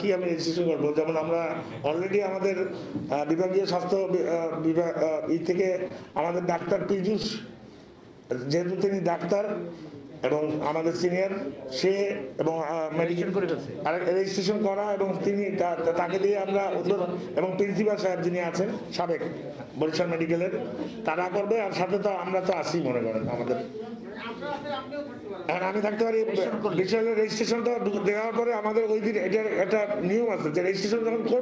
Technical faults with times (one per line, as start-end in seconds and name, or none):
5.88-7.26 repeated stalls (stutter)
27.23-27.97 jitter buffer speed-up
30.46-31.35 jitter buffer speed-up